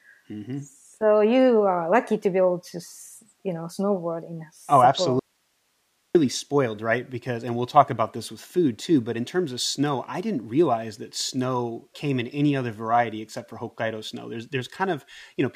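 Speech that cuts out abruptly at 5.19 s and returns at 6.15 s, leaving nearly a second of bare hiss about 45 dB below the voice. This audio dropout to a faint residue likely comes from the signal being lost upstream while the following path stayed live.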